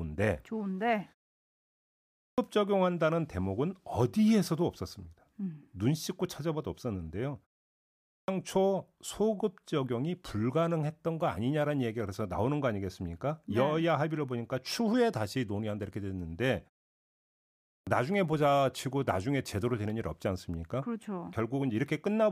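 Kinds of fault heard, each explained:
Clipped start after a pause: the output device sleeps through silence and needs about a third of a second to wake, so speech resuming at 2.06, 7.96 and 17.53 s loses about 320 to 340 ms; waveform and spectrogram show a hard-edged onset from silence.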